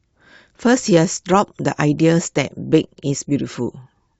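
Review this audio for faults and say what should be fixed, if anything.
Nothing should be fixed, as the review found no faults in this audio.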